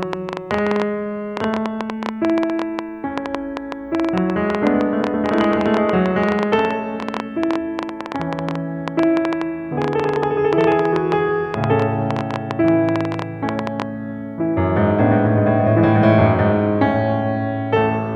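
From 0.03 s to 13.83 s a train of clicks ticks over the music, 10.4 per second at an uneven pace, about 150 similar pops peaking well above the music. The likely cause is interference or a faulty connection or power supply injecting repeated pulses.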